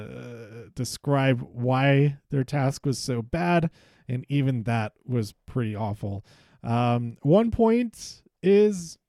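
No technical faults can be heard anywhere in this speech recording. There is nothing here that needs a time mark or a measured value.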